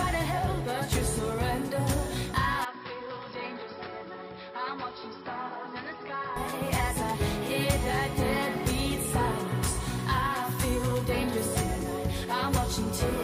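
From 2.65 to 6.36 s the sound abruptly goes dull and boxy, dropping about 10 dB with nothing above 5.4 kHz and a faint new hiss underneath, then snaps back clean. It's likely an input switched to a poorer device, with no gap at either changeover.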